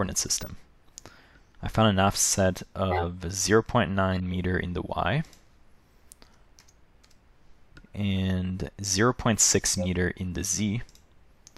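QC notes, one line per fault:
0.41–0.47, 2.91–3.04, 4.14–4.35, 8.16–8.21 and 9.78–9.86 s: corrupt frame decoded, five times. Each one is a short chirpy burst of misplaced energy, lasting from about 50 ms to about 200 ms, which sounds like one damaged frame up to a handful in a row. The decoder played frames with flipped bits, so misread gains and codes put energy at the wrong frequencies. The loudest is at 2.91 s, peaking around -10 dBFS. The faintest is at 0.41 s, around -30 dBFS.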